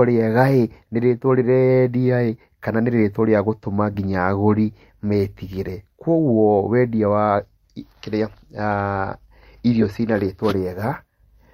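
It's a speech clip with three short glitches from a corrupt frame decoded: at 3.93–3.96 s, a quieter one at 8.71–8.73 s, and the loudest, spanning about two frames, at 9.81–9.85 s just before "ci na". Flipped bits made the decoder misplace energy across frequencies.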